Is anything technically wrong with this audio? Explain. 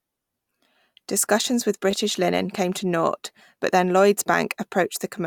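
Yes, there is a repeated buffer in the speech from 1.91 to 1.93 s. A 10 ms chunk plays twice more with hard joins, producing a brief buzz. The waveform shows identical repeating segments, and the spectrogram shows vertical streaks.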